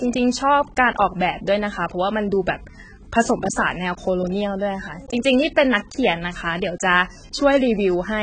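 From start to finish the speech sounds dull and smeared, with nothing above 9.3 kHz and a warbling, fizzy edge on sibilants and held vowels. The likely cause is heavy AAC compression, consistent with AAC-LC at a low bitrate near 16 kbps. The encoder discards the top band and quantises what remains so coarsely that detail swirls from frame to frame. A plain low-pass filter would darken the sound without that shifting, watery texture.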